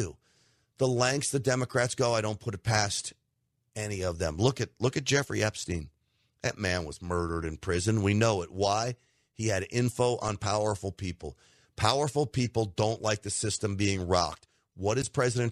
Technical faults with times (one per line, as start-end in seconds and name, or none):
10.27-10.29 corrupt frame decoded
15.02-15.07 corrupt frame decoded